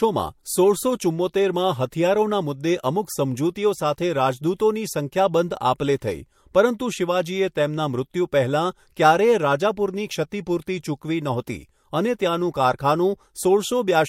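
Pre-echo at 1.90 s, just after "સોળસો ચુમ્મોતેરમાં", and at 4.58, 5.78 and 10.30 s: hiss about 12 to 19 dB up fills roughly 17 ms before each attack, because the transform codec, which fits a fixed block of about 26 ms that never switches to shorter blocks, spreads its noise back into the quiet gap. Unlike a click or dropout, the hiss comes before the attack and softens it.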